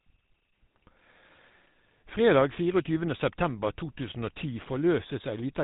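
Speech throughout the clip has a plainly audible buzzy, gravelly roughness and nothing above 3.8 kHz. That is GSM full-rate codec damage: the coder models the vocal tract, drives it with sparse regular pulses, and runs at a rate that fits 13 kbps.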